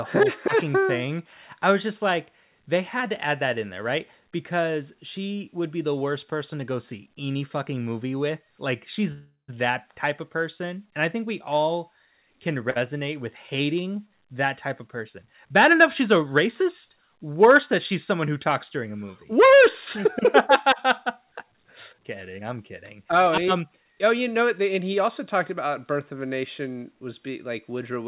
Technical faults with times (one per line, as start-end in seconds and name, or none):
9.12-9.50 call audio freeze
12.70-12.78 short stall from a late packet
15.45-16.15 jitter buffer speed-up
21.53-24.59 jitter buffer speed-up